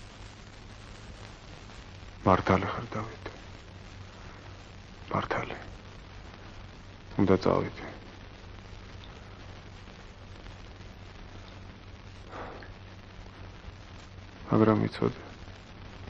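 A wrong sample rate takes hold at 1.85 s and lasts to the end: the samples are played back slower than they were captured, which fits 48 kHz material run at 44.1 kHz without conversion. Everything drags to about 0.92 times speed and drops about 1.5 semitones in pitch.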